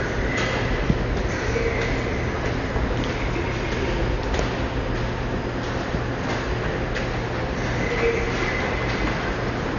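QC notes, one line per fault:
Throughout, Dolby Digital compression: dull, nothing above 7 kHz, rough fluttering noise around tones unlike a clean low-pass, likely from heavy coding at about 48 kbps.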